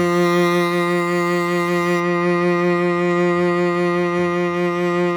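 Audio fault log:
0.0 to 2.0 s, pre-emphasis left on: the music sounds thin, glassy and overly bright, with hissy upper detail, because treble boosted before transmission was never cut back, leaving 10 kHz about 11 dB hot against 1 kHz, a tilt matching a 50 µs FM curve.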